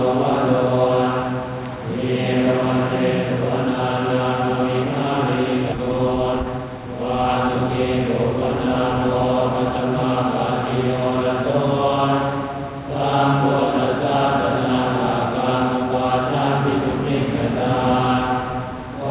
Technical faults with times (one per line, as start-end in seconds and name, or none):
5.72-5.74 skip ahead
5.77-7.99 jitter buffer speed-up